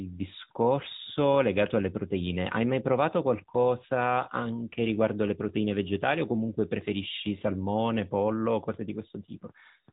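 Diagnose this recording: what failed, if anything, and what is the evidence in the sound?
AMR narrowband mobile codec damage runs throughout the speech, so the failure sits at the codec stage. Nothing above 4 kHz survives, consistent with 8 kHz sampling, leaving the voice dull and boxed-in. The codec rebuilds speech from a vocal-tract model excited by a few pulses per 5 ms subframe, and that sparse excitation gives a plainly audible buzzy, synthetic edge. The degree of coarseness points to a mid-rate mode around 10 kbps.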